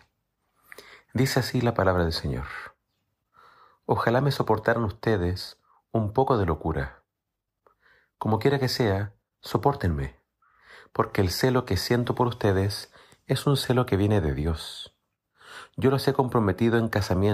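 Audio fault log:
No faults detected.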